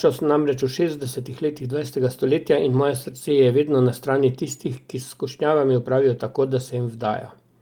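From 0.99 to 1.05 s, between "sem namreč v" and "letih dvajsetega stoletja in", is a lost packet rebuilt from error correction. Roughly 40 ms, consistent with two lost packets, was replaced by lower-bitrate redundant copies. There's no dropout, but the sound turns rougher and noisier, appearing on a spectrogram as smeared, grainy texture.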